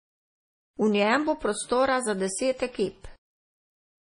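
Throughout, the speech sounds watery and swirly, with nothing above 10.6 kHz. This is likely heavy MP3 compression, consistent with a bitrate near 32 kbps.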